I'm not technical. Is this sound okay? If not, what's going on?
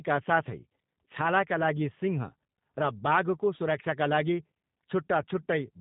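No. The speech went through the G.729 codec, a phone-call squeezer that drops everything high-pitched, so throughout it sounds muffled, rough and slightly robotic.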